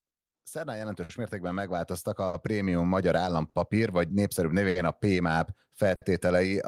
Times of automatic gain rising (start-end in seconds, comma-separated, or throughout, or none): 0.52-3.15